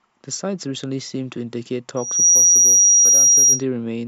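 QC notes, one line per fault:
1.96–3.63 s, loudspeaker feedback squeal: a single 5.7 kHz tone swells out of the speech within roughly a third of a second and holds about 15 dB above it as the microphone re-amplifies its own loudspeaker. Unlike a steady interference whistle, it builds from nothing.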